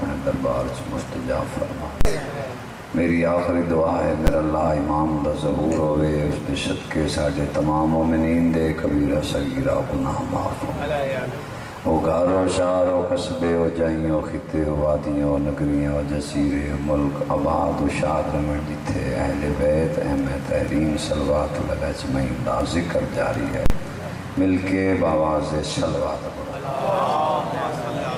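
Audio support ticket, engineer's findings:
Invalid numbers at full scale, 2.01–2.05 s, 4.27 s, 23.66–23.70 s. Probable DSP stage emitting infinite/invalid samples, clamped to max positive/negative. 40 ms blocks give loud pops at onset and release with silence between; the 10 ms block at 4.27 s is a single bang.

Call bitrate drop, 8.17–12.29 s. Bandwidth estimator fell; Opus encoder target cut from 64 to 16 kbps, held at the floor about 4 s. Coarser coding plus high-frequency cutoff: sound goes rough, watery, muffled until rate recovers.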